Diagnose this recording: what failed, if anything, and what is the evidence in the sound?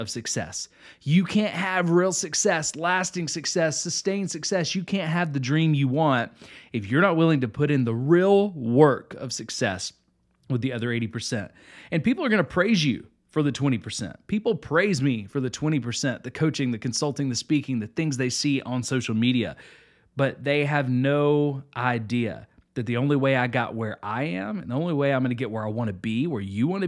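Nothing failed; no faults heard.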